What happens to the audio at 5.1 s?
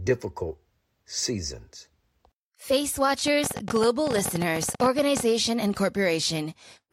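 At 5.1 s the speech sits under a train of clicks that runs from about 3.27 s to 5.21 s: around thirty near-identical pulses at roughly 14.5 per second, spaced unevenly and peaking well above the speech, so they tick through pauses as well as words. The likely cause is interference from nearby equipment or a faulty connection or power supply injecting pulses. Their repeated, matching shape and sustained run set them apart from a lone click or random crackle.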